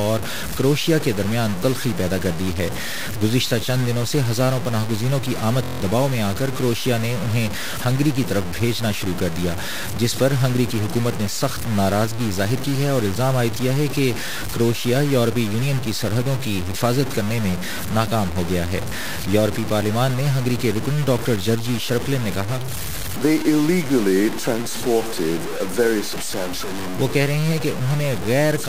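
Throughout, the audio carries coarse grain that tracks the signal, roughly 10 dB below it, likely low bit depth without dither from 4-bit truncation. From 5.64 to 5.81 s, a system hang loop repeats a 23.2 ms fragment seven times, which fits a 1024-sample buffer. It produces a 43 Hz buzz and loses around 150 ms of audio.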